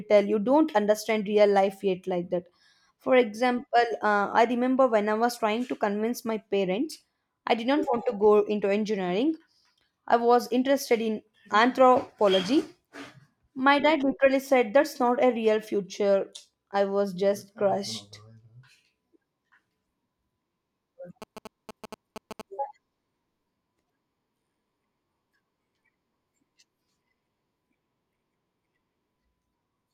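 A nearby 2G phone sending GSM signalling bursts is being picked up and rectified by the audio circuitry of this speech recording, between 21.22 and 22.41 s. The phone is only exchanging short control transmissions, not carrying a call, so the interference comes as a galloping dit-dit-dit run of short buzzes at about 217 Hz, sitting roughly 15 dB below the speech.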